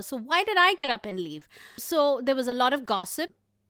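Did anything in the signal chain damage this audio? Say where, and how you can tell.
Yes. The damage happened on the network. There is repeated packet loss, giving a robotic sound, from 0.77 to 1.43 s and again from 2.49 to 3.31 s. The speech turns choppy in both stretches. The first has five short holes, the second four, none longer than 60 ms. The receiver fills each hole by stretching the last bit of sound, so roughly a quarter and then a sixth of each stretch is patched rather than real.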